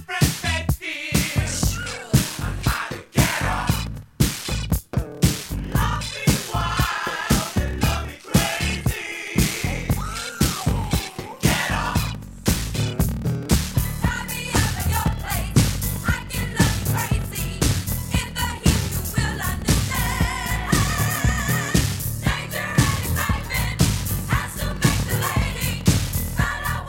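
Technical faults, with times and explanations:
1.44 s to the end: block size mismatch (padded). Each block is topped up with silence, adding a buzz at 38.3 Hz and slowing playback to 0.889 times normal speed at near-normal pitch, which fits 1024-sample blocks being read as roughly 1152.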